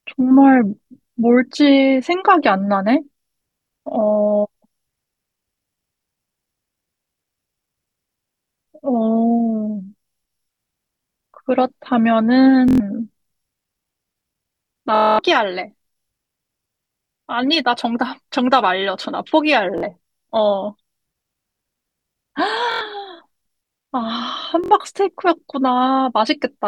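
Bluetooth stutter breaks up the speech five times: at 12.68 s for 116 ms, 14.95 s for 232 ms (the longest, a machine-gun buzz), 19.78 s for 46 ms, 22.72 s for 93 ms, and 24.64 s for 70 ms. Each time, audio packets arrived late or not at all, so the receiver kept replaying its last short slice, which fits lengths of about 23 ms. The repeats come out as a buzzing stutter, and the speech then resumes further along, as though it had kept running underneath.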